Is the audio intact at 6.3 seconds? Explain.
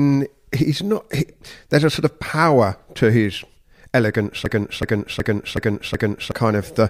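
No. A system hang loop runs from 4.46 to 6.32 s after "power to his elegance". A frozen system left the hardware replaying one 0.37 s piece, about 2.7 times a second and five times over, which fits a 16384-sample buffer. It sounds like a skipping record, and about 2 s of audio is lost. Unlike a dropout or glitchy skip, each repeat is identical.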